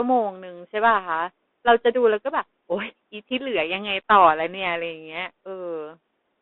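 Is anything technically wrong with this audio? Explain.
Yes. The whole clip carries Bluetooth CVSD headset codec damage. The speech sits in a band from 250 Hz to 3.6 kHz. A one-bit up-or-down coder, which fits a 64 kbps stream, lags loud fast highs. S sounds turn scratchy over a granular hiss.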